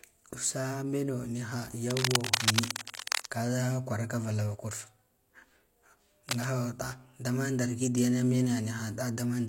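Cable scratch noise rasps over the speech from 1.89 to 3.27 s, as loud as it. A quieter burst follows at 6.29 to 6.48 s. Likely a worn connector shifting.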